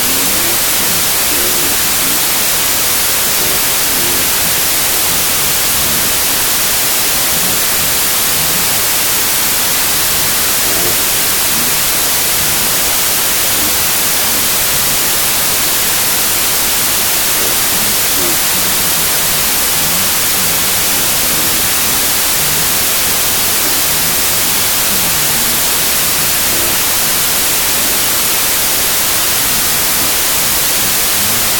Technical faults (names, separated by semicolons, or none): wrong sample width